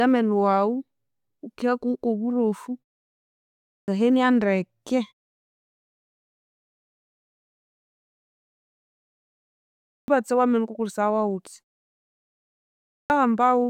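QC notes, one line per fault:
3.68–3.88 s, 9.86–10.08 s, 12.90–13.10 s: clipped start after a pause. Each onset after silence (pauses of 0.92 s, 4.81 s and 1.34 s) loses about 200–220 ms, so speech begins abruptly without its first sounds. At 9.86 s this falls just before "wa menu wukakolesaya wawutya". The output device goes to sleep during silence and is still waking when sound resumes.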